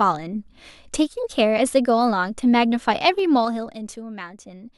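From 3.07 to 4.09 s the speech carries zipper noise. The level drops by about 10 dB in coarse steps of about 3 dB, around four per second, with no smoothing. Each jump leaves a small click. Together they make a ticking that rides on the voice.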